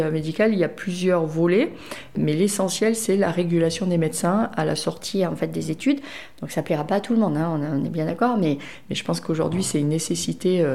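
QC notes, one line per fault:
4.98–8.66 s, wrong sample rate: audio plays about 1.09 times fast and 1.47 semitones sharp, consistent with 44.1 kHz material played back at 48 kHz without conversion.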